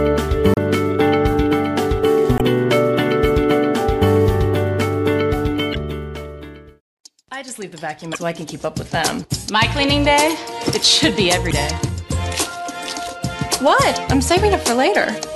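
Five short glitches, each about 40 ms, break into the audio at 0.54, 2.37, 5.71, 8.11 and 11.48 s. That's damaged data in a compressed stream: the decoder hits corrupted frames and loses sync briefly until it locks back on.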